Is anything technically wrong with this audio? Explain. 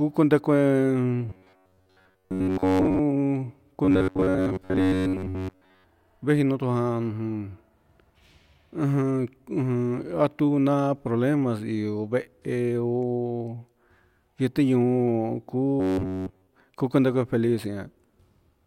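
Yes, there's robotic sound from repeated short buffers, three times: 1.30 to 3.00 s, 3.85 to 5.84 s, and 15.8 to 16.47 s. The speech goes into a stiff, metallic buzz pinned at 93.8 Hz. That's likely the playback looping roughly 10.7 ms chunks because fresh audio wasn't arriving, with most of the speech repeated in the first two stretches and essentially all of it in the last.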